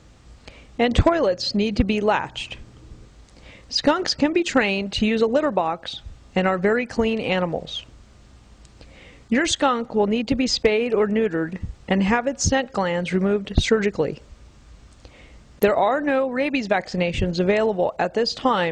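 At 15.63 s a sharp snap lands on top of the sound, peaking at about -15 dBFS and lasting only a few milliseconds. This is an electrical switching spike, most likely from a nearby switch, motor or static discharge whose brief arc was picked up by the audio line. Unlike a digital dropout or edit click, the underlying sound carries on unbroken beneath it, with no gap or discontinuity. The snap is simply added over the top.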